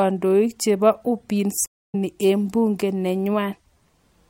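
At 1.66 s the connection carrying the stream dropped, and the player had to reconnect and start a new decoder partway through the stream. In the speech this is a stream reconnect: about 207 ms of silence, then at 1.95 s the audio picks up again with "eng bunge", but from a later point, skipping roughly 150 ms. So a short stretch of the speech is lost, not merely paused.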